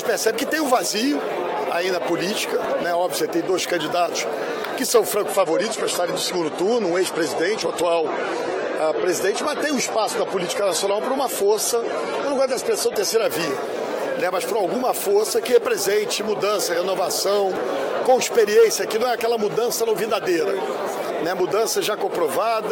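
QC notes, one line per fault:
2.65 s, audio missing between chunks: the audio skips forward at this point, with roughly 30 ms gone and the two sides butted together with no silence between them, so the sound jumps abruptly mid-flow. The likely cause is a recorder or processor working in 5-second blocks that dropped a short slice while closing one block and opening the next. This is the only such skip in the clip.
5.29–13.24 s, adaptive stream at a lower bitrate: the stream switched to a cheaper encoding for this stretch, which fits a step down from 96 to 32 kbit/s AAC-LC after the connection slowed. The encoder discards everything above 14 kHz, so the top end is audibly duller, and coding artefacts grow more noticeable. The quality changes suddenly at both ends, with no gap in the audio.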